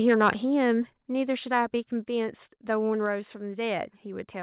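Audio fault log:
0.08–0.30 s, microphone overload: The input gain was most likely set too high, driving peaks about 6 dB past the converter's ceiling. A small share of samples have their tops sheared flat, and those squared-off waveform tips add a harsh, crackly rasp to the loudest syllables at the start of the speech. This is distortion baked in at capture, and it stays audible even through the band-limited call path, which carries nothing above 4 kHz.
1.02 s, 2.04 s, 3.06 s, microphone volume stepped down: Likely reacting to that early overload, the call software cut the device's input volume in three discrete steps, spaced almost exactly a second apart: about 4 dB, then about 2 dB, then about 2 dB. Each change lands within roughly 10 ms, so speech and room tone both drop together as an abrupt staircase rather than a smooth fade, leaving the clip about 8 dB quieter by the end than just after the overload.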